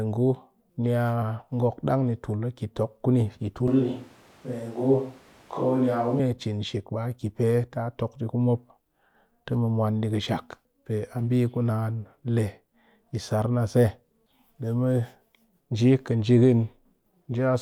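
After "kuni yi", 3.68–6.20 s turns abruptly hollow and thin, with room noise about 30 dB below: likely a switch to a distant microphone, not added reverb.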